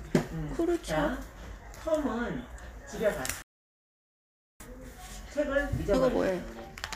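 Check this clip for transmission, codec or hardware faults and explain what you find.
There's one clear fault: a playback stall. At 3.42 s the sound just stops dead and stays silent until 4.60 s, a gap of about 1.18 s, then picks up again. It's not a fade or a dropout in the signal itself; the output simply goes quiet mid-flow. The likely cause is the player starving for data, or its thread getting blocked, so nothing reached the output until it recovered and carried on.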